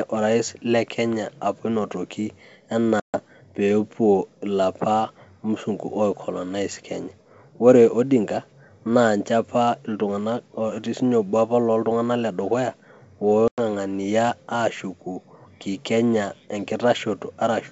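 Hard-edged silent holes at 3.00 to 3.21 s and 13.48 to 13.60 s, each resuming slightly distorted: packet loss on an ADPCM call, throwing the decoder's predictor out of step.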